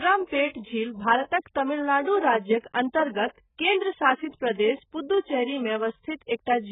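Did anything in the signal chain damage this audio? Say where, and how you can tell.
Yes. For the whole clip the speech sounds dull, smeared and watery, with a warbling, fizzy texture on sustained vowels and sibilants, and nothing at all above 3.8 kHz. This is likely AAC compression at the codec stage, with the AAC-LC encoder starved of bits in a way that fits a very low bitrate around 8 kbps. It drops the upper band entirely and quantises what remains very coarsely, which is what causes the heavy smearing.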